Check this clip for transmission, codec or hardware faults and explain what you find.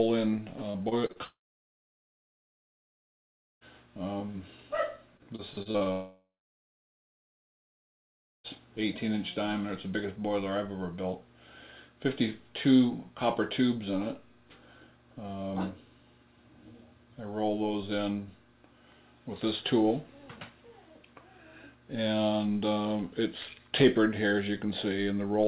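Two transmission faults recur in pairs early in the clip, heard over a narrowband call path that stops at 4 kHz, consistent with 64 kbps G.711 mu-law.

Repeated packet loss (robotic sound), 0.71 to 1.18 s and 5.17 to 5.89 s: short bursts of lost packets, four gaps and then seven, at most about 34 ms and 30 ms respectively, were patched by stretching the preceding sound. Roughly a quarter of each span is synthetic, giving a choppy stutter.

Long network dropout, 1.24 to 3.64 s and 5.92 to 8.47 s: each follows its choppy stretch. A brief fading buzz gives way to silence lasting about 2.3 s and then 2.1 s. The audio resumes with about 2.4 s and 2.5 s absent, likely because the stream stopped arriving entirely.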